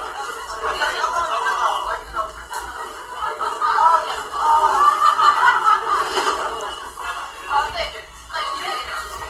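Throughout the whole clip, the audio has likely passed through Opus compression at a low bitrate, roughly what a 16 kbps stream in its music mode would give. The encoder keeps each band's overall energy but lacks the bits for fine detail, so it fills bands with folded copies of lower ones or with noise. The damage is plainly audible: tones sound grainy, rough and noisy rather than swirling, and content still reaches about 20.1 kHz.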